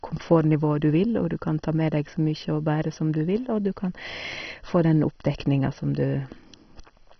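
Throughout the speech, the sound is dull and gurgling, with granular distortion and nothing above 6.1 kHz. This is likely MP2 compression, heavily starved, which fits a bitrate near 32 kbps. Upper sub-bands drop out, so a spectrogram shows a hard ceiling and patchy, flickering blocks below it.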